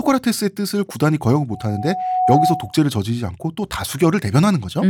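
From 1.50 to 2.80 s a loudspeaker feedback squeal rises at 740 Hz. The microphone is picking up its own loudspeaker. Unlike a steady interfering tone, it swells over about three-quarters of a second until it sits a few dB above the speech.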